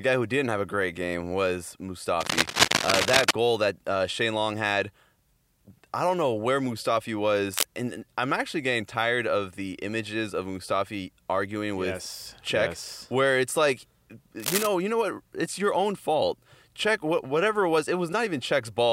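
Bursts of harsh scratching and rustling cut across the speech three times: from 2.20 to 3.31 s, between "a great game was" and "goal that uh"; from 7.50 to 7.66 s, just before "and I'm actually getting"; and from 14.40 to 14.67 s, between "yes where it's like" and "you know what", slightly quieter than the speech. The first two are roughly as loud as the speech. This is cable scratch noise, likely from a worn cable or connector shifting and rapidly changing its contact resistance.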